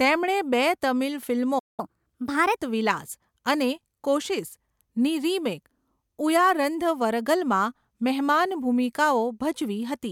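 At 1.58 s, just after "બે તમિલ", the speech cuts out abruptly and the line goes dead for about 193 ms, until 1.80 s, before resuming. This gap is a playback stall. The likely cause is that the player's buffer ran dry, or its output thread was briefly held up, so there was no audio to send to the device until it recovered.

From 1.80 s to 2.57 s, starting on "વિલાસ' અને 'કોશિસ'ની રિમેક", the speech races ahead, running at 1.25 times normal speed and sounding squeaky and hurried, raised by about four semitones. It settles back to normal pitch and tempo at 2.57 s. This is catch-up at higher speed. The player resamples the audio that piled up during the stall so it can regain the lost time, which is why pitch and speed climb together instead of only the tempo changing.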